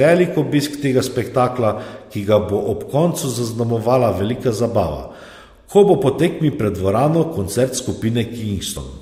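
At 8.76 to 8.78 s, near the end of the speech, compressed frames are skipped. About two frames of roughly 23.2 ms each go missing, either absent from the stream or rejected by the decoder, so the audio jumps forward by around 50 ms. A spectrogram shows a thin vertical line where harmonics jump abruptly; the waveform shows a discontinuity without a gap.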